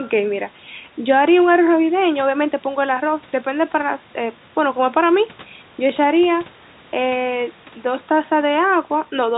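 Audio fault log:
Nothing stood out on listening to this speech.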